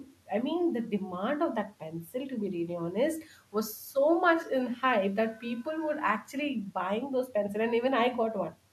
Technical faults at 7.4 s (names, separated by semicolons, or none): none